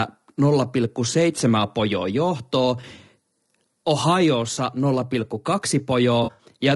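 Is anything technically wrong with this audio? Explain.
Yes. The speech carries two faults. Throughout, it sounds plainly rough and grainy, with noise filling the gaps between pitch harmonics. That is likely low-delay AAC compression such as AAC-ELD, and it fits a bitrate near 32 kbps. Its short frames resolve harmonics poorly, so a spectrogram shows smeared harmonic lines with hiss between them.

AAC frame loss with concealment occurs at 2.81–2.84 s and again at 6.23–6.45 s. Here the decoder substitutes guesses built from the last good spectrum. About 20 ms is lost first, then 120 ms scattered across 160 ms, with runs up to roughly 70 ms. These sound like smeared, noisy, phasey patches, and they appear as blurred, noise-textured blocks in the spectrogram.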